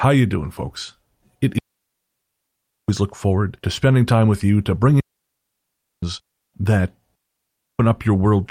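Speech with three digital wireless dropouts at 1.59 to 2.89 s, 5.00 to 6.03 s and 7.15 to 7.79 s, muting for 1.3 s, 1.02 s and 0.64 s. The receiver lost too much data and faded quickly to near silence, leaving clean holes with no noise bursts around them.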